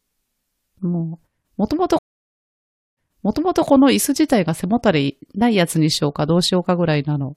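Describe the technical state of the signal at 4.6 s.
At 4.6 s the speech signal is intact, with no dropout, clipping, glitch or other fault at that moment.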